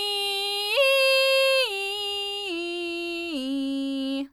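Nothing goes wrong anywhere in this bit of music; there's no technical fault to point to at any moment.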